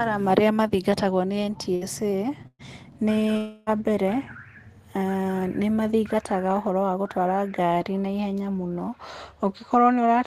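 Speech with two bursts of packet loss and a longer gap. The first burst falls at 1.75 to 1.84 s, right after "marĩa mathingatagwo nĩ": the receiver stretches the last sound for about 56 ms, and the speech then resumes 60 ms further on. The second, at 2.47 to 2.62 s, holds a fading fill for about 118 ms and drops into roughly 30 ms of silence before the audio picks up, with 120 ms lost. These fills are short, and the jump forward is brief. At 3.37 to 3.70 s the concealment runs much longer, about 297 ms of held, decaying sound with no silent stretch, before the speech returns 300 ms later. That length points to a likely long network dropout rather than a burst, since the fill lasts several tenths of a second instead of a tenth or so.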